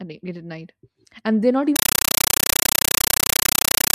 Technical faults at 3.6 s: compressed stream played as audio

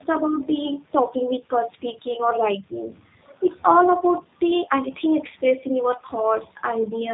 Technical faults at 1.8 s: tandem speech coding

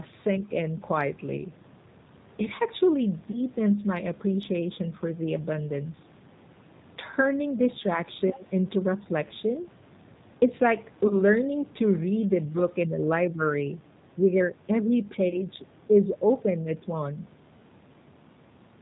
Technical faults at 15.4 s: G.729 codec; VoIP packet loss concealed by the speech codec

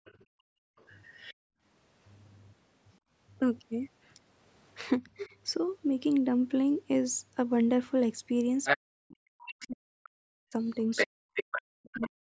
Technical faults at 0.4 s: other side's voice leaking through; background gated by the echo canceller

